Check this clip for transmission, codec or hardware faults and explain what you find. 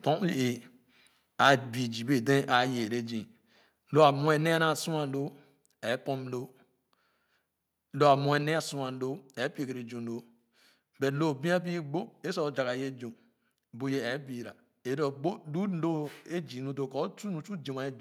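Two hardware-side faults turn up, both in the first half of the clip.

Microphone overload hits at 1.42–1.54 s and again at 4.02–4.04 s. The loudest speech peaks sound flattened and crackly. They sit about 4 dB and about 2 dB past the converter's limit. The likely cause is input gain set too high, so the converter shaves off the tops of a small share of the waveform.

A microphone volume step-down follows at 4.11 s, just after the second distorted peak. The speech and the background both drop by about 2 dB at once and stay lower. This is likely the call software cutting the device's input level in one step after it sensed clipping.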